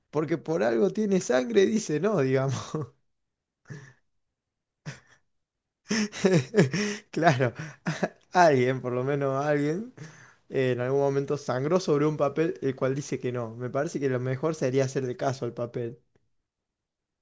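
Speech recording with no audible technical faults anywhere in the clip.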